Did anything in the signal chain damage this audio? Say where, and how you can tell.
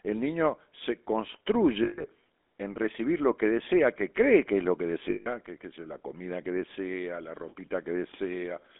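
Yes. Throughout, the sound has a buzzy, gravelly roughness and sits in a narrow band from about 250 Hz to 3.5 kHz. This points to the codec stage, namely the GSM full-rate codec at 13 kbps, which rebuilds the voice from coarse, sparsely pulsed excitation.

Two brief rough, metallic rings come from the network stage as lost GSM frames. The first runs from 1.84 to 2.07 s, just before "en recibir lo que", and the second from 5.10 to 5.28 s, between "que es lo que" and "que es la comida". In each gap, the decoder repeated the last good frame, consistent with about 160 ms of missing frames.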